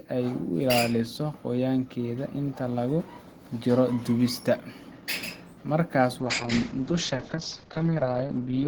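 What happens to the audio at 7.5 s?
A call bitrate drop runs from 6.2 s to the end. The encoder falls from 32 to 7 kbps, coarsening speech and cutting highs above 8 kHz, so it sounds muffled and rough.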